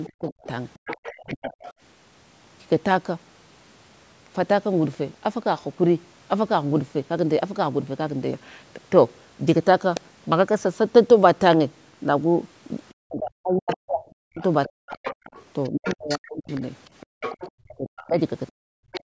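Other side's voice leaking through runs from 0.04 to 1.73 s. A second voice sits faintly under the talker, about 15 dB below. This is likely loudspeaker playback reaching the microphone because the echo canceller left part of it in place. Inside that stretch, speech suppressed in double talk spans 0.07 to 1.52 s. The talker's voice sinks and breaks up while both voices overlap, for around 0.7 s in all, dropping by roughly 40 dB at its deepest. The likely cause is that the canceller could not tell the talker from the echo and turned both down together.

The leak returns from 12.89 to 19.01 s, again about 15 dB under the speech. Double-talk suppression follows from 13.03 to 16.49 s, with about 2 s of the talker's voice dipped or chopped, at worst by roughly 40 dB.

Background gated by the echo canceller comes at 17.06 to 17.20 s. The room sound briefly falls away by about 38 dB for roughly 150 ms and then comes back. 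The canceller clamped the microphone hard while the loudspeaker was active and released it shortly afterwards.

A final double-talk dip from 17.49 to 18.79 s again chops the talker's voice by roughly 40 dB, for around 0.7 s in total.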